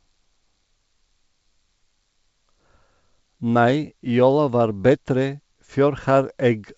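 No technical faults are audible.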